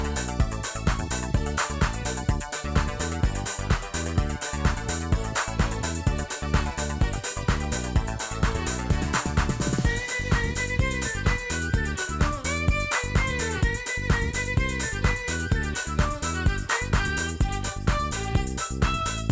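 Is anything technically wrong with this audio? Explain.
No, nothing technical stands out here: the audio sounds fine all the way through, with nothing that catches the ear.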